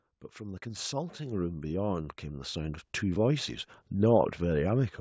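A speech clip, heard through a call's microphone processing with nothing above 8 kHz, shows automatic gain rising from 0.38 to 3.64 s. Over those three-odd seconds the level climbs by about 13 dB as the gain control, judging the input too quiet, steadily turns itself up. What separates this from a talker leaning toward the microphone is that the background noise swells in step with the voice, so the whole signal rises rather than just the speech.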